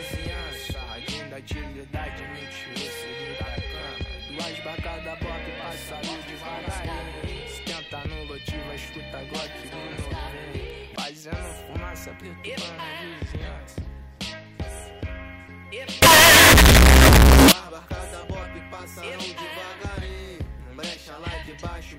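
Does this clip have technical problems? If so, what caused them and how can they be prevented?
Yes. From 16.02 to 17.52 s, the 16-bit samples were likely read with signed and unsigned mixed up, so the top bit of every sample is inverted. Each time the waveform crosses zero it now leaps from one extreme of the range to the other, and that stretch turns into a blast of very loud, harsh distortion in which even the quietest material is as loud as everything else. Prevention: declare and verify the sample format explicitly at every interface that reads or writes raw audio.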